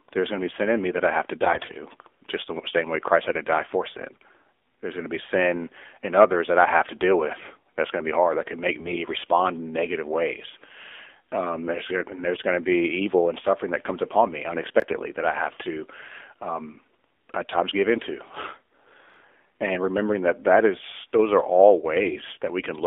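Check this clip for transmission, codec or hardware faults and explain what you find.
Three kinds of fault are present: narrowband mobile codec coloration across the whole recording, three short bursts of AMR bit errors, and two places where chunks play out of order.

The AMR narrowband mobile codec is heard throughout. The speech is confined to a line band of roughly 300 Hz to 3.5 kHz, with nothing present above the codec's 4 kHz ceiling. The encoder rebuilds the voice from a vocal-tract model fed by a sparse set of pulses, and the thin, buzzy, somewhat synthetic texture fits a low AMR-NB mode around 7.4 kbps. The codec damage is plainly audible.

AMR bit errors appear at 1.42 to 1.77 s, 4.12 to 4.27 s and 8.74 to 8.99 s. In each burst, bits in the less protected part of the frames were corrupted while the protected core survived. The excitation pulses and the finer pitch, gain and spectral parameters were therefore decoded wrongly. 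Pitch and loudness hold roughly steady, but the speech turns hoarse, scratchy and gargly. The first burst is the longest and most damaged, which suggests an error rate of several percent. The later two are milder.

Chunks out of order occur at 14.80 to 14.84 s and 19.10 to 19.16 s. In each spot a block of audio arrived or was written late and played after material that should have followed it. The 20 ms chunk size fits one block displaced by one position at the first spot and by two at the second. No audio is lost, but the sequence is scrambled, giving a brief jumbled stutter across the hard joins.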